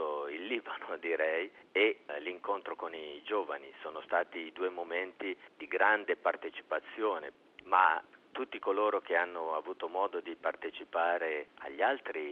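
No technical faults can be heard anywhere in the clip. Nothing in the audio breaks up, drops out or distorts at any point.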